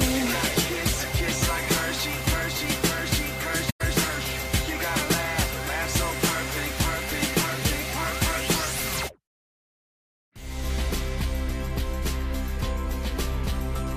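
AAC frame loss with muting: a run of compressed frames went missing and the decoder zeroed their spectrum instead of concealing them, so the audio fades into a short soft-edged gap from 3.69 s to 3.81 s, roughly 0.11 s, which fits about five lost frames.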